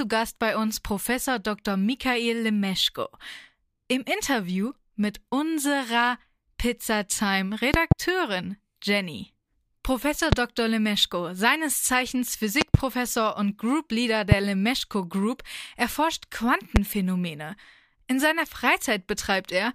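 Loud pops hit the speech at 7.74–7.94 s (a double), 10.32–10.35 s, 12.61–12.77 s (another double), 14.32–14.34 s and 16.76–16.79 s, each jumping about 20 to 25 dB above the speech. They are likely voltage spikes from a connector or switch. They show as tall spikes on the waveform and as thin full-height vertical lines on a spectrogram.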